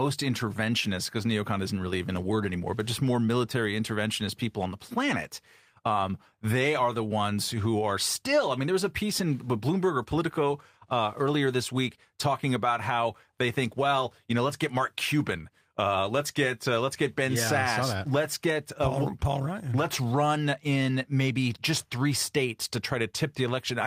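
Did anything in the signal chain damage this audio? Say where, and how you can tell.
No, nothing in the chain damaged this speech.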